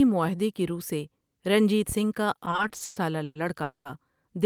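Repeated stalls (stutter) run from 2.39 to 3.38 s: ten short gaps break up the speech across that second, the longest about 120 ms, adding up to 360 ms of filled-in sound, over a third of the span. Packets were reaching the receiver more slowly than they were being played, so its buffer kept running dry, and each time it stretched the last sound until more arrived. Nothing is lost, but the speech drags and hiccups.

A call audio freeze follows at 3.63 to 3.88 s. The sound stops moving forward for about 220 ms: the last sound is carried on briefly as a fading buzz, then about 130 ms is plain silence before the speech resumes from where it halted. The likely cause is packets held up in transit, delaying the stream by the same 220 ms, so a gap was inserted rather than anything dropped.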